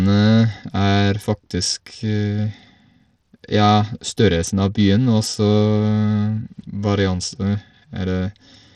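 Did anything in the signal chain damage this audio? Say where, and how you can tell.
Yes. The damage sits at the codec stage and runs through the whole speech clip. The treble is unsteady and flickers, and a gritty noise rides on the sound. Nothing remains above 18.5 kHz. The likely cause is Bluetooth SBC compression at a low bit pool, which fits a bitrate of around 80 kbps. SBC splits the audio into a few wide sub-bands. The weak top bands get few bits or none, so they drop in and out. Coarse quantising of the rest adds the grit and aliasing.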